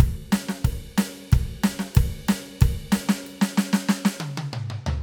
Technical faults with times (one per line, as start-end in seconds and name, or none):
none